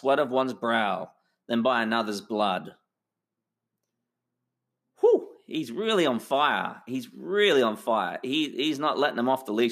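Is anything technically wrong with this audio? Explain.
No, nothing technically wrong can be heard in this speech clip. No audible fault turns up anywhere in the recording.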